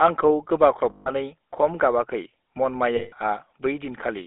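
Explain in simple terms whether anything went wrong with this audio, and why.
Throughout, the speech passed through the GSM full-rate codec, an old mobile-phone voice coder. It rebuilds the voice from a simplified model driven by coarse pulses, which gives the plainly audible buzzy, gravelly roughness, and the line only carries roughly 250 Hz to 3.6 kHz, so it sounds thin.

There are also lost GSM frames, from 0.90 to 1.10 s, just before "खम गाबाखै", and from 2.96 to 3.13 s. Each gap lasts about 160 ms. The decoder fills it by repeating the last good sound, which produces a brief rough, metallic ring instead of a clean continuation.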